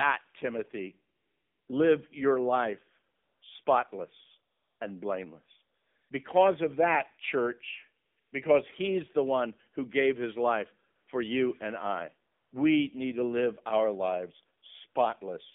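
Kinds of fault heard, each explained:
AMR narrowband mobile codec: speech coded at 7.4 kbps within about 200 Hz to 3.6 kHz sounds buzzy and synthetic, not merely muffled as by filtering.
AMR comfort noise: pauses, like those after "live your life" and "and blameless", switch to smooth synthetic hiss rather than the dead silence of a dropout.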